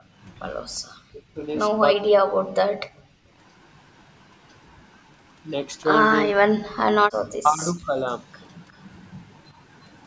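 From 0.0 to 0.14 s the echo canceller gates the background down by about 14 dB, a brief dip in the waveform's noise floor. The speech then drops out at 1.1 to 1.38 s and 1.94 to 2.46 s, likely suppressed in double talk, with the waveform collapsing by some 35 to 40 dB. At 2.87 to 3.34 s the background is gated again, about 40 dB down, leaving a blank band on the spectrogram. Similar speech cuts follow at 6.26 to 6.45 s and 7.35 to 7.98 s. At 8.75 to 8.79 s a very faint echo leak likely repeats sound from 356 ms earlier, a ghost trace on the spectrogram, which shows nothing above 8 kHz throughout.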